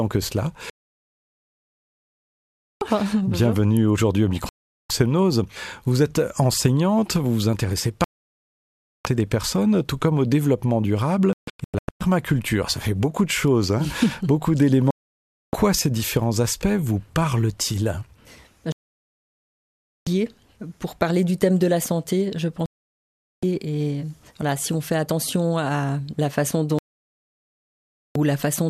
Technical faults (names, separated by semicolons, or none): digital broadcast dropout